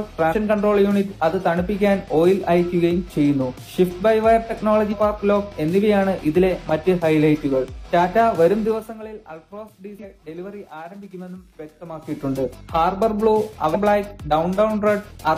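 Damaged data in a compressed stream produces four short disturbances, at 0.28–0.34 s, 4.88–4.94 s, 9.99–10.05 s and 13.70–13.76 s. Each time, corrupted bytes make the decoder misread its frames, lose sync and hunt for the next valid header, leaving a brief glitch. Zipper noise runs from 8.63 to 9.00 s while the level falls by roughly 15 dB. The drop is applied in coarse unsmoothed steps, about a hundred per second, so a fine ticking buzz rides on the sound.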